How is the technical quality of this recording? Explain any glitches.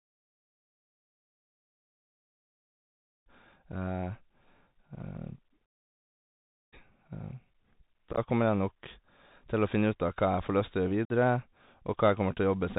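The quality is poor: the whole recording carries narrowband headset coding damage, and there are two brief dropouts near the end.

A Bluetooth CVSD headset codec is present throughout. The audio is encoded one bit per sample as up-or-down steps with an adapting step size, which fits a 64 kbps link. Everything above 4 kHz is gone. Sibilants turn scratchy, loud bright sounds distort, and a granular hiss sits under the speech.

Unconcealed Bluetooth headset packet loss occurs at 8.12 to 8.19 s and at 11.05 to 11.11 s. Short voice packets between headset and phone failed to arrive and were replaced by silence or an idle pattern rather than patched over. In the first event about 41 ms is missing in scattered gaps spread over roughly 68 ms, with the longest single gap 15 ms. That pattern points to around ten dropped packets and sounds like a rough, crackly chop. The second event loses about 49 ms, likely around fifteen packets. 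Both have abrupt edges, and the speech returns briefly quieter afterward.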